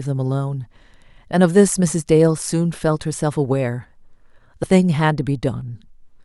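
At 4.62 s the speech has compressed frames skipped: about one frame's worth of audio, roughly 20 ms, is never played, either because it is missing from the stream or because the decoder rejected it as damaged. The frame length is 23.2 ms, so playback jumps straight ahead by that unit.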